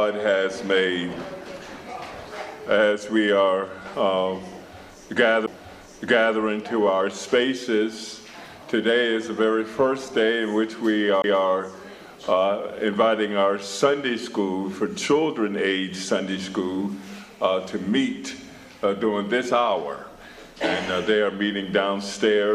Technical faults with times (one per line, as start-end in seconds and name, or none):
5.46 CD skip
11.22-11.24 CD skip